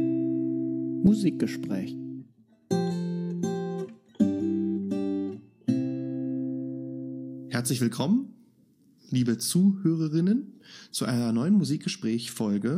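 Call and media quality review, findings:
No call or media quality findings to report for this clip.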